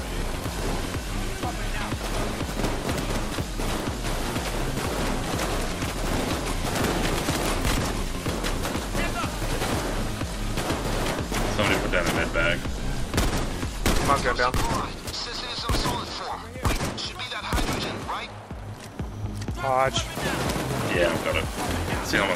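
Sharp, isolated ticks at 0.44 s and 7.46 s are bit error spikes: a single sample flipped by a power of two, then snapping straight back.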